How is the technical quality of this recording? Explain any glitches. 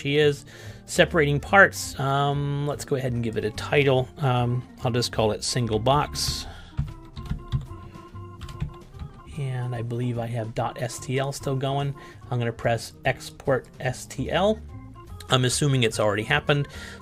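No glitches turn up anywhere in this recording, so there's nothing here that needs explaining.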